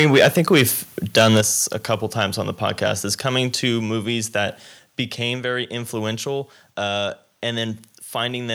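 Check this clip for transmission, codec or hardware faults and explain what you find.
The speech has two hardware-side faults, both in the first three seconds.

Microphone overload at 0.0–0.63 s, 1.16–1.41 s, 1.91–2.24 s and 2.85–2.88 s is likely caused by input gain set too high, so peaks run into the converter's ceiling and get flattened. It is worst early, about 10 dB and 9 dB over, with a few percent of samples cut, adding harsh crackle. The later bursts, about 3 dB and 1 dB over, are milder.

Microphone volume stepped down at 1.41 s, right after the second overloaded stretch, likely because the call software reacted to the clipping by cutting the device's input gain in one move. The voice and background both drop abruptly by about 7 dB.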